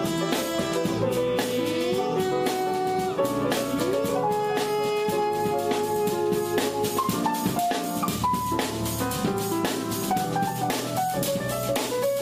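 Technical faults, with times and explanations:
No technical faults can be heard in this clip.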